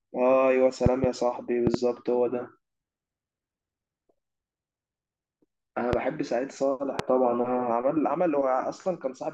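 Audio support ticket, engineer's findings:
Loud pops at 0.86–1.06 s and 1.67–1.77 s (double pops, roughly 20 dB above the speech) and 5.93–5.96 s and 6.99–7.02 s (single, around 15 dB). Likely a voltage step from a connector, switch or static, shaped downstream into a thump over continuing speech.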